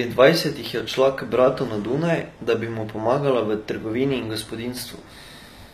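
Throughout the clip, the speech was likely squeezed through HE-AAC compression at a low bitrate, around 24 kbps judging by the damage. The encoder kept only the lower spectrum and rebuilt the treble by copying lower bands upward under a coarse envelope. The damage is plainly audible: the top end sounds synthetic, s sounds turn gritty and metallic, and nothing at all remains above about 14.9 kHz.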